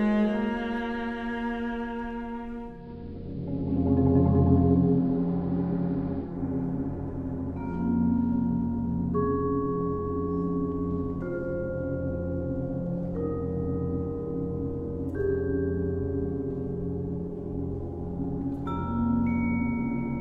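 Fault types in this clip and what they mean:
Digital radio blending to analogue: the hybrid receiver lost its digital signal at 2.64 s and made a 270 ms cross-fade to the same station's AM broadcast, then blended back to digital at 6.45 s. While the analogue path is in use, the sound turns dull and narrow. The level drops by about 1 dB, and a steady hiss appears, sitting roughly 40 dB below the programme.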